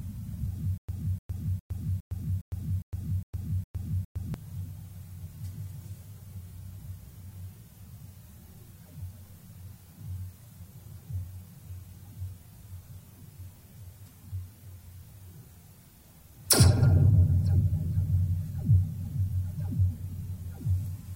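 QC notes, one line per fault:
0.78–4.34 s, stutter with silent gaps: the same 0.30 s snippet of sound comes back nine times on a steady 0.41 s cycle, each followed by about 0.11 s of silence. That's likely a stalled player replaying its last fragment, so the real audio there is gone.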